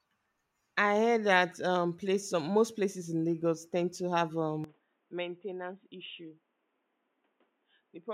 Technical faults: input switched to a poorer device

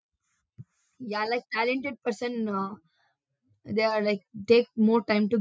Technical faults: automatic gain rising

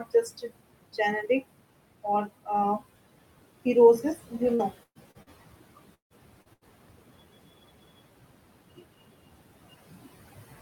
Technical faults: noise suppressor artifacts; speech cut by the noise suppressor; repeated packet loss (robotic sound); long network dropout; short concealed packet loss; burst of packet loss

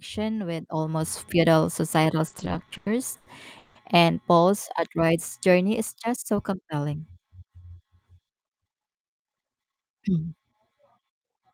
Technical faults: repeated stalls (stutter); jitter buffer speed-up

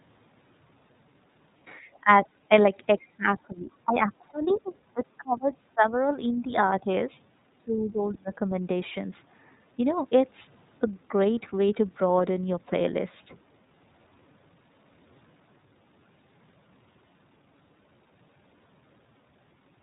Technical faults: iLBC codec; other side's voice leaking through; speech suppressed in double talk

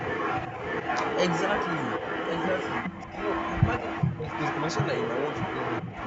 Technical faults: echo leak; speech suppressed in double talk

